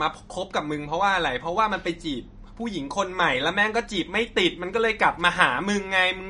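From start to finish the speech sounds watery and swirly, with nothing at all above 10.6 kHz and metallic chirps on the s sounds. This is likely MP3 compression at a starved bitrate, fitting roughly 40 kbps, where the encoder cuts the treble and weak frequency lines flicker between frames.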